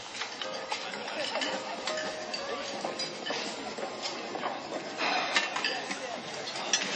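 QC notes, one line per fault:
throughout: likely MP3 compression at a low bitrate near 31 kbps. Nothing remains above 8.3 kHz, and weak detail below flickers watery and swirly between frames, plainly audible, which a plain low-pass filter would not cause.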